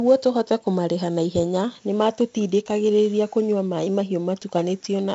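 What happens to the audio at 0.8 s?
At 0.8 s the speech carries a gritty hiss that rises and falls with its loudness, plus roughness on sharp onsets, and it sounds dull because nothing is present above 7.7 kHz. This is heavy 4-bit ADPCM compression, running through the whole clip rather than starting at that moment. Each sample is coded as a small step from a predicted value. The coarse steps leave level-tracking noise, and the step size adapts too slowly for fast attacks. The sound fits a 64 kbps stream.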